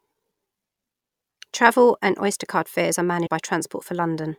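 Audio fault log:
3.26 to 3.28 s, compressed frames skipped: the speech lurches forward with a short smeared blip, not a sharp click, losing around 150 ms of audio. This fits about five 26.1 ms frames that the decoder dropped as missing or damaged, their overlap softening the join.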